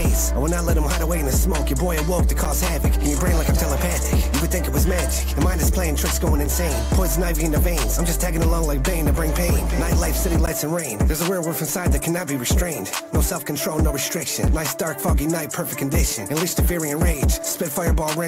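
At 2.45 s, 10.46 s and 14.48 s, gaps between stream segments cut hard-edged silences of about 9, 14 and 7 ms into the sound, spaced on a 4-second segment grid. Unlike a dropout, nothing is missing; the sound simply resumes slightly later.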